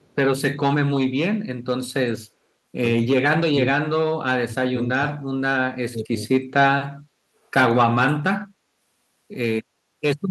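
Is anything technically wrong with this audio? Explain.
Yes. This speech clip has two kinds of fault.

At the very start, from 0.00 to 0.15 s, there is an echo leak: a faint copy of the speech returns about 250 ms late, roughly 40 dB below the talker. The likely cause is a loudspeaker on the far end whose echo canceller let some of the microphone pickup through and sent it back. It sounds like a faint, delayed ghost of the voice. On a spectrogram it shows as a weak, blurred duplicate of the speech pattern, shifted right by a quarter second.

Speech suppressed in double talk occurs four times: 3.17 to 3.62 s, 4.48 to 5.31 s, 5.89 to 6.19 s, and 7.83 to 8.43 s. In each, the talker's level sinks abruptly, by as much as 35 dB in the deepest dips and around 20 to 25 dB in the milder ones, with each dip lasting roughly a third to half a second. This is likely an echo canceller that could not tell the local talker from loudspeaker echo while both sides spoke, so it turned everything down. 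The voice seems to duck or vanish in pieces. The waveform shows sudden pinched gaps in the envelope, and the spectrogram shows darkened vertical bands where the harmonics fade.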